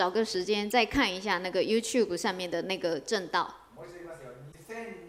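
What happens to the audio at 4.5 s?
A brief glitch cuts in from 4.48 to 4.55 s. It comes from damaged data in the compressed stream: the decoder misreads the corrupted frames there, loses sync, and jumps ahead to the next valid frame header.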